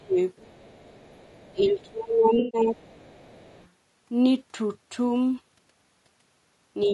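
Throughout, the speech is likely passing through low-delay AAC compression (AAC-ELD) at a bitrate that sounds like around 32 kbps. Its short frames resolve the harmonics poorly, leaving the voice rough and grainy with noise between harmonics.

From 0.00 to 0.18 s the speech is suppressed in double talk, likely because the echo canceller could not tell the talker from loudspeaker echo. The voice dips by about 25 dB for roughly a fifth of a second.

From 0.36 to 1.64 s the other side's voice is leaking through, likely as uncancelled loudspeaker echo. A faint second voice sits roughly 35 dB below the talker.

Double-talk suppression returns from 1.53 to 2.89 s, with the talker's level ducking by about 20 dB across roughly a second in total.

From 2.39 to 2.61 s there is AAC frame loss with concealment. About 0.14 s of audio went missing, seven lost frames. The decoder filled the gap from the last good spectrum, so this stretch sounds smeared and noisy.

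From 2.77 to 3.69 s the other side's voice leaks through again, a faint intruding voice roughly 35 dB under the speech.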